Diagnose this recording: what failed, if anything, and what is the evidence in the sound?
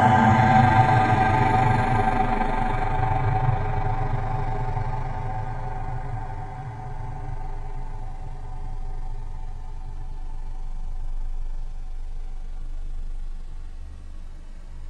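Nothing failed; no fault is audible in this recording.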